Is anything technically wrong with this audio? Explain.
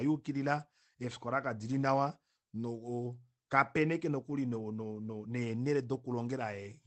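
No, nothing technically wrong.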